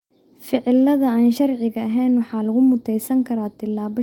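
Nothing here to flag, since the speech comes through without any technical faults to point at.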